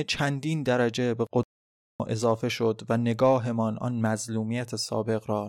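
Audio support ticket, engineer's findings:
Speech cuts to dead silence 1.43–2.00 s, about 0.56 s, then resumes mid-flow. Playback stall, likely player buffer underrun or blocked audio thread starving output.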